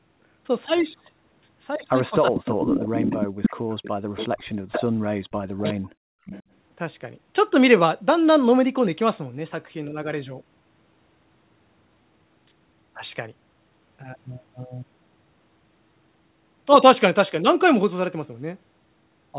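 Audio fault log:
2.29–2.40 s, 3.03–3.44 s, 4.99–5.06 s and 5.42–5.77 s, speech suppressed in double talk: the talker's own level falls sharply, by roughly 25 to 40 dB at the deepest, in short bites lasting from a few tens of milliseconds up to about 0.4 s. This points to an echo canceller that likely could not tell near-end speech from loudspeaker echo and turned everything down. Unlike background gating, the voice itself is cut, not just the room behind it.
2.34–4.82 s, 5.63–5.73 s and 6.26–6.43 s, echo leak: a delayed copy of the voice trails the original by 0.37 s. In the long first stretch it is nearly as loud as the speech, only slightly below it. The two brief later scraps sit well underneath. The fixed delay and the recognisable repeated speech mark this as residual loudspeaker pickup that likely slipped past the canceller and was sent back, not reverberation, which would smear continuously rather than repeat at one spacing.
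6.05–6.26 s, background gated by the echo canceller: the room sound beneath the speech drops by about 31 dB for roughly 0.2 s and then returns, running straight into the next echo scrap at 6.26 s. Only the background dips here, with no sign of speech being cut, which separates it from double-talk suppression. The canceller clamped the microphone hard while the loudspeaker played and let go afterwards. The G.711 telephone band, with nothing above 4 kHz, stays constant across all of this.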